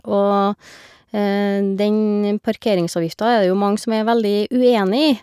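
Nothing technical goes wrong anywhere in this bit of speech, so there's no fault to point to at any moment.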